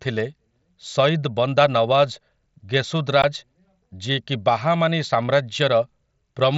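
At 3.22 s there's a brief gap in the speech: unconcealed Bluetooth headset packet loss on an mSBC link. About 15 ms of audio, which fits a couple of dropped packets, went missing between headset and phone and was simply filled with silence or an idle pattern, so you get a tiny abrupt hole with hard edges.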